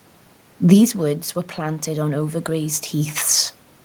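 Speech, with automatic gain rising from 1.55 to 2.83 s. After the input drops about 11 dB, gain climbs about 4 dB, so the waveform envelope and the spectrogram's noise floor swell together.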